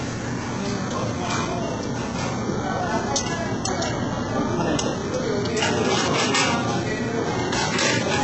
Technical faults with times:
0.00-8.23 HE-AAC compression

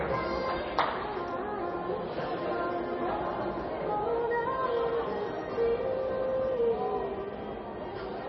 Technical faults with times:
0.00-8.28 MP3 compression

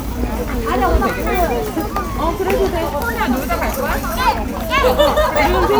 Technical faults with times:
none

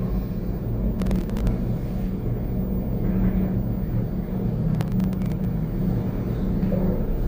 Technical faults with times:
0.99-1.47 processor overload crackle
4.75-5.45 processor overload crackle

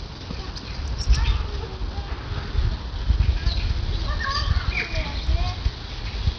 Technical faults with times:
0.00-6.38 Bluetooth SBC compression

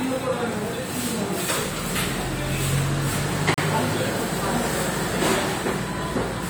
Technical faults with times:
3.54-3.58 gap between stream segments

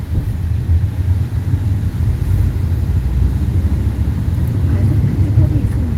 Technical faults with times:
none

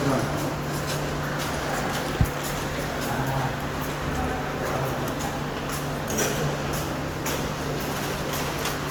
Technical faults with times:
0.00-8.91 generation loss

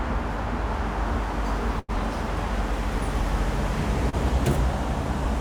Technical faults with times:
1.79-1.90 burst of packet loss
4.09-4.15 short concealed packet loss

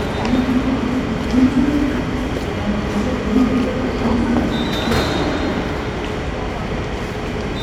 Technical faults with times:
none

